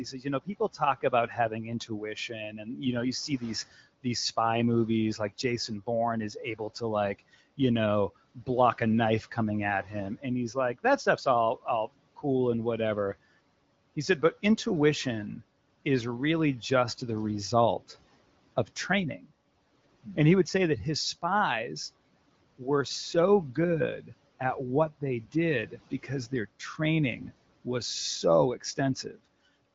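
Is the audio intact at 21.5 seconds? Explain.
Yes, the audio at 21.5 seconds is intact, with nothing there beyond the room noise sitting about 23 dB below the speech and the clear, lightly coded sound of an HD Voice call at 15.85 kbit/s.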